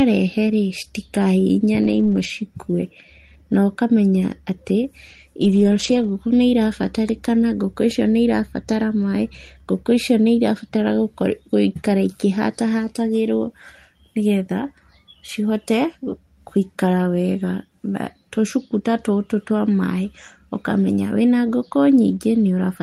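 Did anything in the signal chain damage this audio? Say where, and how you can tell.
Yes, at the network stage: three stretches show a lost packet rebuilt from error correction, at 0.47 to 0.53 s, 1.83 to 2.25 s and 5.43 to 6.09 s. The speech never drops out, but each stretch turns rougher and noisier. On a waveform there is no silent gap. On a spectrogram the harmonics blur into grainy noise across those spans. Missing packets were replaced by the low-bitrate backup copies carried in the packets that followed them.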